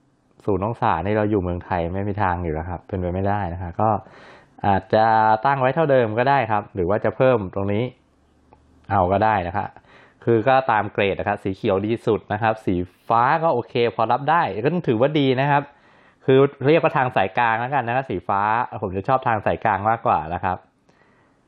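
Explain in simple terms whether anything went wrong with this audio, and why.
Nothing went wrong here: you can listen all the way along and not hear a single glitch, dropout or hiccup anywhere in the audio.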